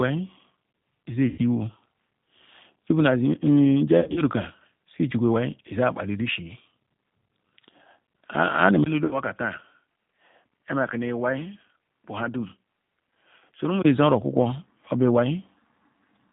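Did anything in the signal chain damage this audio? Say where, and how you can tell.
Yes. At the codec stage, the whole clip carries the rough, slightly synthetic texture of G.729 coding, which fits an 8 kbit/s stream. A spectrogram shows a hard ceiling with nothing above 4 kHz, and harmonics that look smeared and pulse-like rather than clean.

At the network stage, the audio shows VoIP packet loss concealed by the speech codec at 1.28–1.41 s (100 ms lost), 3.99–4.22 s (120 ms in scattered gaps over 160 ms, longest run 60 ms), and 9.05–9.20 s (60 ms). In each, the sound stretches into a buzzy tone or a coloured noise that fades. On a spectrogram these gaps appear as repeated, flattened harmonics, and the waveform envelope decays before recovering.

At the input stage, from 8.84 to 13.84 s the sound turns duller and boxier after a 20 ms silence, likely because the input switched to a poorer device. 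The spectrogram shows the top edge dropping to 3.4 kHz. The waveform settles about 5 dB lower, with a new noise floor roughly 50 dB down.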